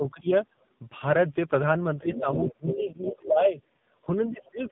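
Speech heard through an AMR narrowband mobile codec, with heavy damage throughout: nothing passes above 3.8 kHz, and the voice has a buzzy, synthetic edge. That degree of coarseness fits a low mode around 6.7 kbps. Unlike a plain low-pass filter, the codec also smears the vocal texture itself. From 2.14 to 3.19 s, the other side's voice leaks through at about 10 dB below the talker. It is likely loudspeaker echo the canceller failed to remove. Speech is suppressed in double talk at 0.0 to 0.31 s, 2.51 to 3.56 s, and 4.33 to 4.61 s, with dips of about 20 dB and about 30 dB in the last one. The middle dip overlaps the leaked voice, which points to the echo canceller ducking the talker while both sides spoke. That overlap separates it from a network dropout, which would silence the audio regardless of the other side.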